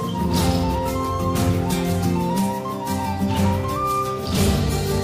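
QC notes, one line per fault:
Nothing here needs flagging; I didn't hear any problems anywhere in the clip.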